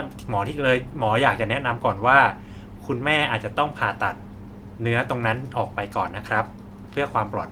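Nothing here stands out as a fault: the speech comes through Opus voice compression at 24 kbps in its hybrid mode, with the full band reaching up to 20.2 kHz.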